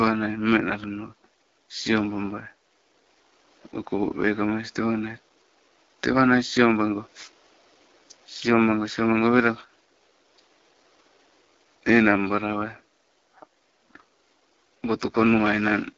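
From start to finish the speech sounds rough and raspy, with nothing above about 7.3 kHz and a faint room noise about 37 dB below it. This is AMR wideband (HD Voice) codec damage, and the harshness points to one of its lowest rates, around 8.85 kbit/s.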